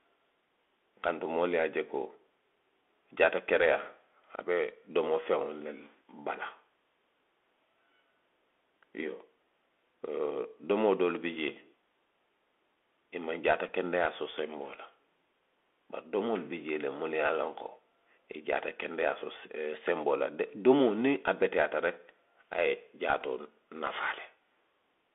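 It's a speech clip carried over a Bluetooth CVSD headset codec the whole way through, and you can hear it plainly. The band runs from about 300 Hz to 3.5 kHz, the s sounds come out scratchy, and there's a grainy hiss under everything, which fits 64 kbps one-bit delta coding where the step size can't keep up with sharp, loud highs. There's also a Bluetooth headset packet repeated twice. The first is at 13.68 s, just before "so senboo la". The second runs from 23.21 to 23.23 s, right after "a ye". Each time roughly 7.5 ms of audio was lost, which points to two dropped packets that the chip filled by decoding the previous packet's bits again.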